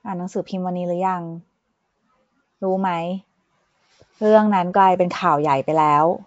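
From start to finish, the speech carries a rough, hissy halo and a smeared, underwater quality. The likely cause is Nellymoser compression, coding each block with too few bits and filling starved bands with noise. The damage fits 32 kbps. Nothing sounds above 7.7 kHz.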